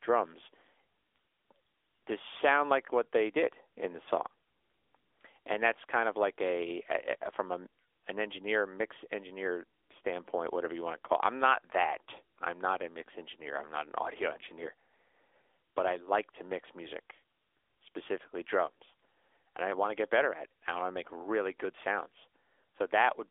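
Right through the clip it's the AMR narrowband mobile codec: everything is squeezed into a 300 Hz to 3.5 kHz band with nothing above 3.7 kHz. The buzzy, synthetic coloration fits a rate near 10.2 kbps.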